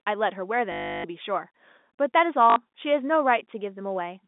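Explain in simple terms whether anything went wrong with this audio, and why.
Packet loss with last packet repeated occurs twice, from 0.72 to 1.04 s and from 2.50 to 2.56 s. Missing chunks were filled by replaying the previous one, giving a buzzing robotic stutter, which fits 20 ms packets. The telephone-band G.711 sound stops near 3.6 kHz.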